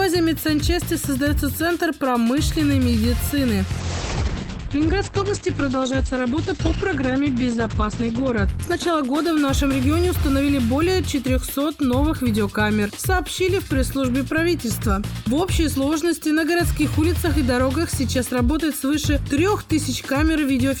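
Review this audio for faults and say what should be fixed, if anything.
A call bitrate drop, 3.81 to 10.69 s, sounds rough and muffled. The top end narrows from 20 kHz to 8 kHz, which fits an encoder cut from around 96 to 10 kbps, worst for 4.31 s. Unlike packet loss, nothing drops out. Smoothing bandwidth estimation and enforcing a minimum encoder bitrate prevents it.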